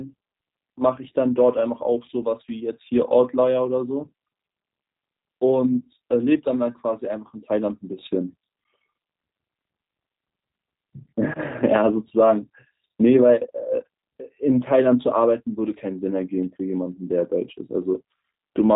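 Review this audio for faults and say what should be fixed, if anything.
G.729 codec damage throughout: the speech is rebuilt from a filter, pitch predictor and sparse pulses, sounding rough and synthetic, with a spectrogram cut flat at 3.8 kHz, fitting an 8 kbit/s stream. Route or record over a wideband codec such as G.722 or Opus instead.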